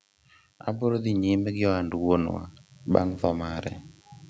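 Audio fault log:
throughout: DECT cordless phone buzz. A thin, steady 100 Hz buzz with a dense stack of harmonics sits some 40 dB below the speech. A nearby DECT handset or base transmits a burst every 10 ms, and the audio circuitry rectifies that radio energy into an audible tone.
0.65–3.74 s: automatic gain rising. Speech and background swell together by about 8 dB over roughly three seconds. The automatic gain control judged the input too quiet and raised its gain gradually, so the hum and room noise climb in step with the speech.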